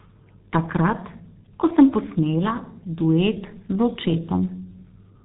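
Throughout the recording the speech sounds muffled and hoarse, with smeared consonants and nothing above 3.8 kHz. That is heavy G.723.1 codec damage. The low-rate coding, which fits about 6.3 kbit/s, refreshes its voice model slowly across long frames.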